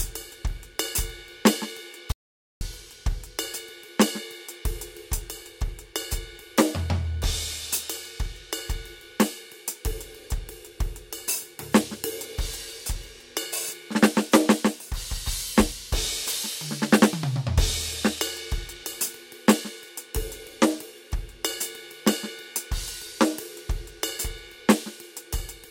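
At 2.12 s the music breaks off abruptly and an audio dropout to silence follows until 2.61 s, about 0.49 s with nothing at all, not even background hiss. The likely cause is the input being lost briefly while recording carried on writing silence. The music resumes mid-phrase with that stretch simply missing. On a waveform the trace collapses to a flat line; a spectrogram shows a clean, fully dark vertical band with hard edges.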